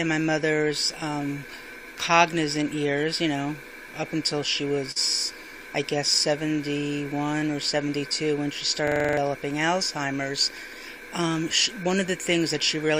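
Three separate glitches turn up in this 13-second audio clip. At 4.91 s there's a short stall from a late packet. The jitter buffer ran dry, so the receiver held the last bit of sound for 44 ms until the packet finally showed up, then carried on from exactly where it left off. Nothing is actually lost, and the playout just slips 44 ms later. What you hear is a brief smear where a sound is held too long around 4.91 to 4.98 s.

The next one is the system hang loop from 8.88 to 9.17 s. The machine or driver froze while the audio hardware kept cycling its ring buffer. The same 42.7 ms slice repeats seven times, which gives a machine-gun stutter at about 23 Hz, and a loop that length fits a 2048-sample buffer. Roughly 0.3 s of real audio gets swallowed behind it.

Then from 10.06 to 10.57 s the jitter buffer speed-up kicks in. After the backlog, the receiver had more audio queued than it wanted. 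To cut the delay it trimmed out short pitch-period-sized chunks again and again, removing around 50 ms in total. That half second plays about 9% fast at unchanged pitch, so it comes across as noticeably hurried rather than chipmunky.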